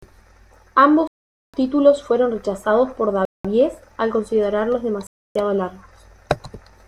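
A likely Bluetooth stall starved the playback buffer three times, cutting the speech to dead silence at 1.07 s (0.46 s), 3.25 s (0.19 s) and 5.07 s (0.29 s) before resuming.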